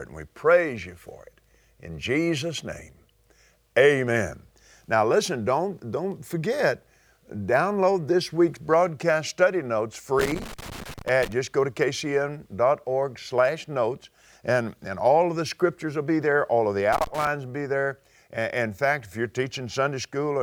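The audio has loose connector crackle twice, from 10.19 to 11.32 s and from 16.93 to 17.27 s. A faulty contact keeps making and breaking, so the signal chops into irregular scratchy bursts.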